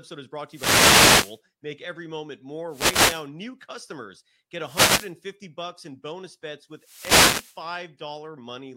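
The wireless microphone's FM signal fades as reflections cancel, letting receiver noise swell over the speech as wireless microphone noise hits: short swishes of static at 0.47 to 1.41 s, 2.68 to 3.27 s, 4.61 to 5.14 s and 6.73 to 7.67 s.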